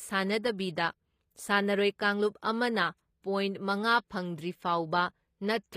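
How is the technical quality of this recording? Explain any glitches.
The recording has one audible problem that runs through the whole clip: the speech has been heavily compressed, likely with HE-AAC, and the coding damage is plainly audible. The encoder spent its few bits on the lower spectrum and synthesised the upper range by spectral band replication, copying lower bands upward under a coarse envelope. The result is a treble that reaches higher but is not genuine, with harmonics that fail to line up across the crossover, so s sounds come out gritty and metallic. Nothing is present above about 15.5 kHz, and the degree of damage points to a low bitrate in the region of 24 kbps.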